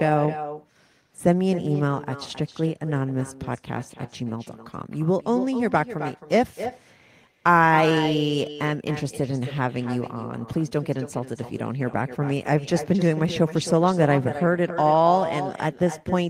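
From start to finish there's echo with no canceller: the far end's speaker leaks into its mic, so every phrase returns about 11 dB quieter, roughly a third of a second late.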